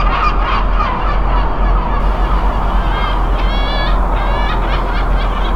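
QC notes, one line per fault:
0.0–2.0 s, de-emphasis applied wrongly: a treble cut meant to undo pre-emphasis hit audio that needed none, sloping the highs smoothly to about 10 dB below 1 kHz by 10 kHz, so the sound is dull and muffled. A spectrogram shows upper bands fading gradually, then returning at 2.0 s.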